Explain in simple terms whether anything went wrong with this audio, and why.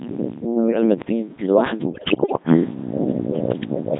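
The whole clip runs through the Codec 2 vocoder, which rebuilds speech from a few basic measurements, so everything sounds heavily robotic and buzzy. Then, from about 1.94 to 2.43 s, bit errors on digital voice radio corrupt roughly one bit in seven, making the voice lurch in pitch and dissolve into warbly gibberish.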